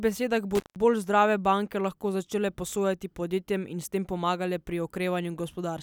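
Speech, with one intermittent contact fault: at 0.55 s the sound drops out for about 0.16 s, crackling at each edge, with faint hiss while the line is open, then returns by 0.76 s on "bolj zdrave banke lahko". That's a loose cable or plug briefly losing contact.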